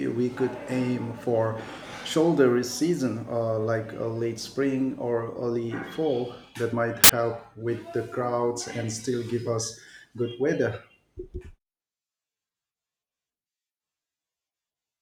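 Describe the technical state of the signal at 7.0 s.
File tags played as audio from 7.04 to 7.09 s: an embedded cover picture decoded as samples gives a hard-edged, very loud white-noise burst.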